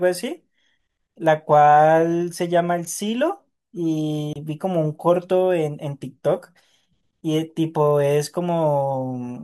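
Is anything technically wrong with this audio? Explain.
Yes. At 4.33 to 4.37 s the speech drops out for about 27 ms, a Bluetooth stall: likely a radio delay drained the headphone buffer. It shows as a flat waveform gap and a blank vertical strip on the spectrogram.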